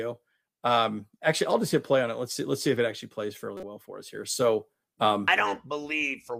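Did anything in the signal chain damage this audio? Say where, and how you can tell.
Yes. At 3.57 s a short chirp or burst of noise cuts into the speech and lasts to 3.64 s, a burst of about 60 ms that peaks at roughly -25 dBFS. The fault sits in the codec stage and is a corrupt frame decoded. The compressed bitstream for about two frames arrived with flipped bits, and the decoder played them anyway. The misread gains and codes put energy at the wrong frequencies, which produces the artifact for the length of those frames.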